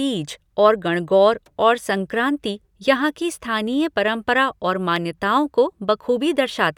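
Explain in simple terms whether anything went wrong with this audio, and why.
Something likely caused dropped samples at 4.96 s: a tiny sliver of the speech went missing, so the waveform jumps and you hear one sharp click.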